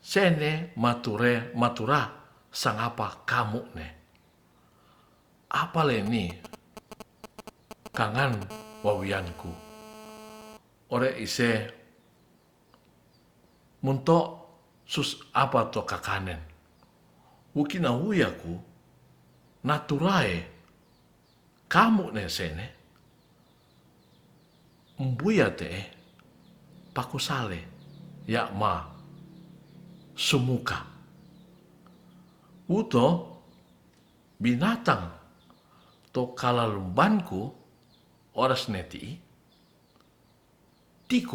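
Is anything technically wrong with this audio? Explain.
Yes. From 6.06 to 8.44 s there are GSM signalling bursts: a nearby 2G phone's intermittent radio pulses are rectified by the audio circuitry, giving galloping ticks and short 217 Hz buzzes about 10 dB below the speech. A spectrogram shows clustered vertical striations, and the waveform shows grouped spiky bursts. From 8.50 to 10.57 s a GSM phone buzz follows as the phone enters a call. The pulses now come steadily 217 times a second, producing a hard, raspy buzz about 20 dB below the speech. It appears as a dense comb of harmonics spaced at 217 Hz across the spectrogram.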